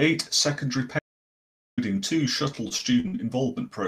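The input feed was likely lost for a moment, with the recorder writing silence until it returned. From 0.99 to 1.78 s this audio dropout to silence cuts the speech off mid-flow and leaves about 0.78 s of dead silence with no room tone underneath. The sound then resumes just as abruptly. Whatever was spoken during that gap is simply missing.

From 2.55 to 3.26 s, repeated packet loss sets in. Packets keep going missing or arriving late, and each hole is patched by stretching the last bit of sound before the next one opens. Several short gaps, the longest 43 ms, leave 80 ms absent and 122 ms filled with synthesised continuation, roughly a fifth of the stretch. The speech turns choppy, with small pieces dropping out.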